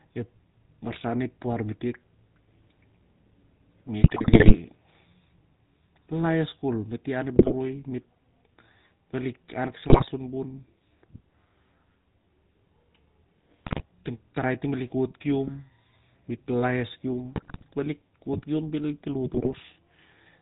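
Running the whole way through, the GSM full-rate codec rebuilds the speech from a vocal-tract model excited by sparse, evenly spaced pulses, at a rate consistent with 13 kbps. With nothing passed above 4 kHz, the speech is dull and narrowband, and the coarse pulse excitation lays a plainly audible buzzy, gravelly grain over it, most noticeable on higher-pitched stretches.

On top of that, GSM bit errors corrupt the decoder's filter, pitch and gain values, so individual frames come out with a warped spectrum or a sudden jump in level. The errors strike at 4.0 to 4.57 s, 7.36 to 7.53 s, 9.88 to 10.08 s, 13.64 to 13.83 s, 17.36 to 17.65 s and 19.34 to 19.54 s, and each burst breaks the speech into squawks, pops and gargling. The longest is the first, at just over half a second. The last has a lower error density.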